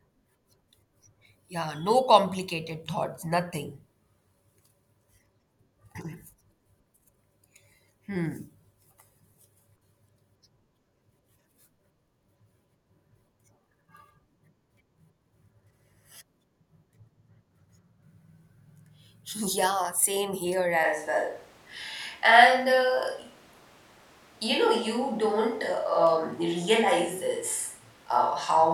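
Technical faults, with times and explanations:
20.85 s to end, switch to a distant microphone: After "same here", the speech abruptly turns roomy and hollow, with thinner bass. Loudness holds steady, but room noise rises to about 30 dB below the speech. The close microphone likely dropped out, leaving a farther one.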